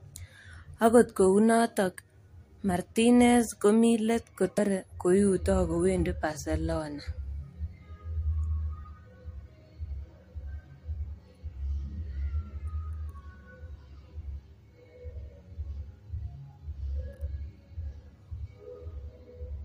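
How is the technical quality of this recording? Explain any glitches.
The speech has one glitch, at about 4.58 s, between "komi let" and "koiuto kowendi": damaged data in a compressed stream. Corrupted bytes make the decoder misread a frame and resync at the next header, giving a brief glitch. Unlike a plain dropout or click, it comes from the decoder losing sync in the compressed data.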